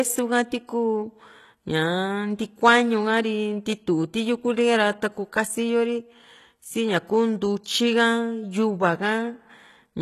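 From start to end, the speech carries plainly audible codec damage, most likely from HE-AAC compression at a low rate, consistent with about 16 kbps. Nothing sounds above 12.3 kHz. The codec keeps only the lower spectrum and rebuilds the treble by spectral band replication, copying lower bands upward under a rough envelope. That top end is synthetic. Its harmonics miss the real ones, so s sounds come out gritty, metallic or lispy.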